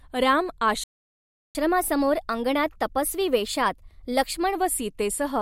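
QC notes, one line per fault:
0.84 to 1.55 s, playback stall: the speech just cuts out mid-flow and sits in dead silence for about 0.71 s before picking back up. That's a hard gap in the output, not a quiet passage in the recording. The likely culprit is the player running dry on data or its thread getting blocked, so nothing reached the output until it recovered and carried on.
1.55 to 4.55 s, catch-up at higher speed: once the stall clears, the speech runs fast for about three seconds, at 1.1 times normal speed, and sits higher in pitch by roughly a semitone and a half. The player is working through its backlog by resampling, which raises speed and pitch together, then it drops back to normal pace at 4.55 s, having won back only part of the lost time.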